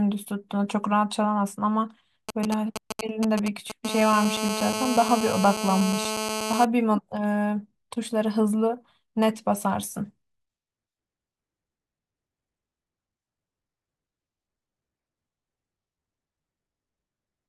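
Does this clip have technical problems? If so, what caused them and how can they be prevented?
Yes. From 2.29 to 3.72 s there are GSM signalling bursts, a galloping run of ticks and short 217 Hz buzzes nearly as loud as the speech. A nearby 2G phone was handshaking with the network, and the audio circuit rectified its radio bursts. Keep phones away from the rig, or switch them to airplane mode.

Then from 3.85 to 6.65 s it settles into a steady GSM phone buzz, a raspy 217 Hz tone, about 5 dB under the speech, because that phone went into a call and kept bursting. Better shielded cabling and RF-filtered inputs stop the rectification if a phone does get close.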